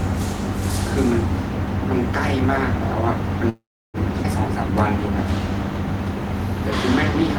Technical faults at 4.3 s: skip ahead

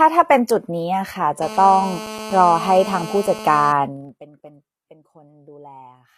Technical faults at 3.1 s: HE-AAC compression; GSM phone buzz

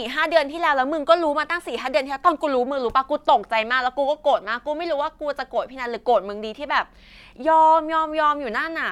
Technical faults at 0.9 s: none

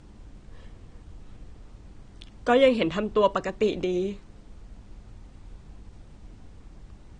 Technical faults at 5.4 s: AAC compression

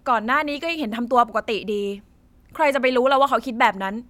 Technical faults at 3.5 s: none

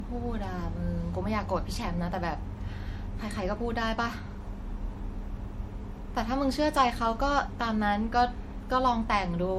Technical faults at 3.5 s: generation loss

